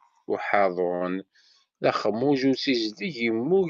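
At 0.95 s the speech briefly hangs: the sound in progress is held for roughly 56 ms longer than it should be, with a faint buzzy, slightly dipped quality, before the talker carries on from exactly where they left off at about 1.03 s. This is a short stall from a late packet. The jitter buffer ran dry when the next packet failed to arrive on time, so the receiver stretched the last sound to cover the gap. Nothing is lost, but everything afterwards plays about 56 ms later.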